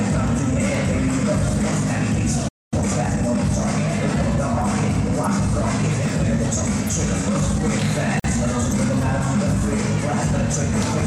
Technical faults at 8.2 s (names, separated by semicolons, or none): gap at a join of encoded pieces